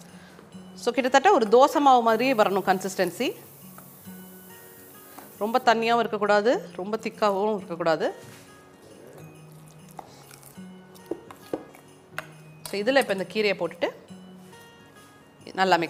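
From 2.09 to 5.63 s the audio is quantised to about 9 bits with noise shaping, so the coarse rounding error is pushed upward in frequency. The result is a steady, thin hiss, roughly 25 dB below the signal, climbing sharply toward the treble.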